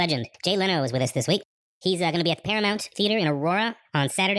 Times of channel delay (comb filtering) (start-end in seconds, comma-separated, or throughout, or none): none